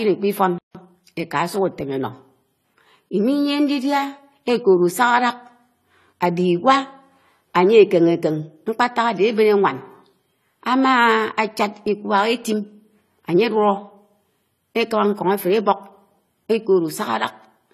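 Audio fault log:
throughout AAC compression: nothing sounds above 14 kHz, and the speech is dull and smeared, with a fizzy, warbling edge on sibilants and held sounds. That pattern, not just a loss of treble, points to AAC-LC coding at a low bitrate, which fits roughly 32 kbps.
0.58–0.75 s playback stall: the speech stops dead mid-flow for about 165 ms, then carries on. A clean gap followed by continuation, rather than a click, is the mark of a player that likely ran short of data.
0.75–1.07 s time-compressed catch-up: right after the gap the speech runs hurried, at about 1.5 times normal speed, yet its pitch stays put. Small pieces are being cut and cross-faded to clear the backlog, unlike a resampling speed-up, which would raise the pitch.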